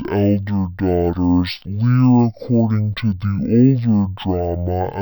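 Throughout the speech, stereo read as mono: interleaved left and right samples are played back as one channel, halving the speed and dropping pitch a full octave.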